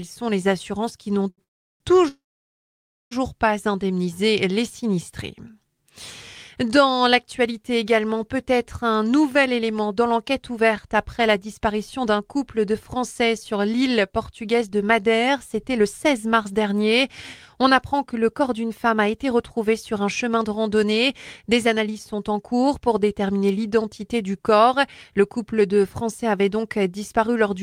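At 1.30 s there is a short stall from a late packet. One packet missed its slot and the jitter buffer ran dry. The receiver held the last sound for about 78 ms until the packet arrived. It then carried on from the same point. Nothing is lost. The sound just lingers slightly too long.

Two call audio freezes follow, from 1.44 to 1.82 s and from 2.08 to 3.13 s. The likely cause is packets held up in transit, emptying the buffer. In each one the last sound trails off briefly, then drops to silence. That silence lasts about 360 ms in the first and about 930 ms in the second. Playback resumes where it stopped. No audio is lost, but about 1.4 s of delay is added.

From 9.35 s to the end at 27.58 s comes a jitter buffer speed-up. The buffer now holds more audio than its target. To shrink that delay, the receiver keeps cutting out tiny slices of one or a few pitch periods. Playback runs at about 107 % speed with the pitch unchanged. 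Roughly a second is trimmed in total. The sound comes across as slightly hurried.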